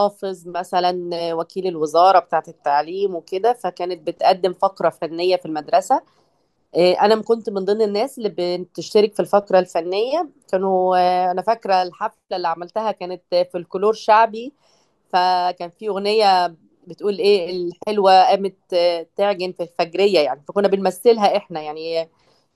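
Nothing in this speech recording stands out as a technical fault, so there's nothing here to track down.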